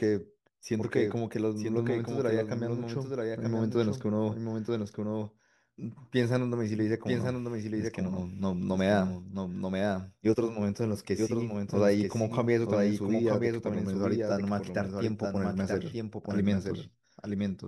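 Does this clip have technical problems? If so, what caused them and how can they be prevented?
Yes. Throughout the speech, a second full-band copy trails about a second behind, roughly 5 dB quieter, with no room colour or decay: a doubled audio track, likely from the same signal being captured again through a slower path. Monitor a single source path and mute duplicate inputs.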